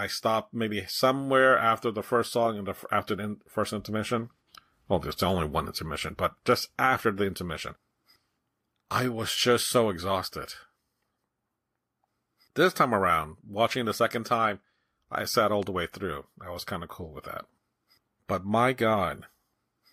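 At 15.63 to 15.65 s, between "time I sat all" and "the way through I", a single loud pop cuts in. It peaks a few decibels above the speech, which carries on underneath. A sudden voltage pulse, likely from a plug, switch, static or driver glitch, causes it.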